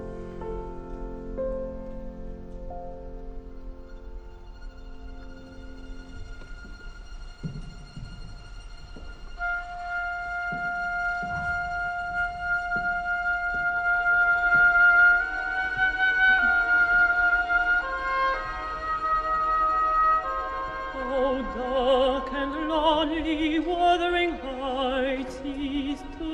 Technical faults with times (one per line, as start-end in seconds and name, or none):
none